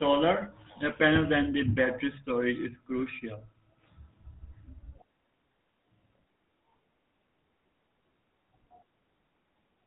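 Across the whole of this speech clip, the sound carries the plainly audible damage of the GSM full-rate codec. Nothing survives above 4 kHz, and a buzzy, gravelly roughness rides on the voice, which fits an excitation rebuilt from sparse regular pulses at around 13 kbps.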